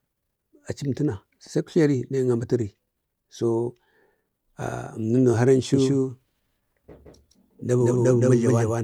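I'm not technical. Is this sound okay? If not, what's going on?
No. From 5.74 s to the end, the speech has a doubled audio track: a second, equally loud copy trails about a sixth of a second behind, likely from a slower second capture path. Unlike a room echo, it starts abruptly, never fades, and sounds just as clean.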